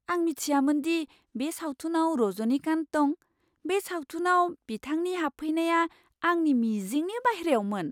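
No technical faults can be heard anywhere in this speech recording. There are no events to place in time and nothing to describe.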